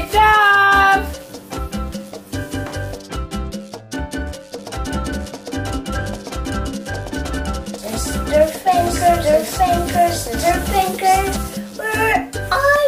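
A doubled audio track runs from 4.58 to 11.36 s: a second full-band copy of the sound trails about a second behind, roughly as loud as the original, with no decay or room colour. It starts and stops abruptly, likely from a second capture path or a misaligned edit.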